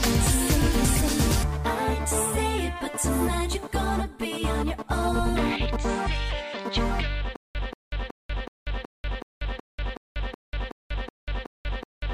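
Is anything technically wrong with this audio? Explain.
Yes. From 7.36 s to the end there is a stutter with silent gaps. A 184 ms fragment repeats 13 times, about every 373 ms, with 189 ms of digital silence between. This likely comes from a stalled stream replaying its last buffer. Unlike a gapless loop, each repeat drops into true silence.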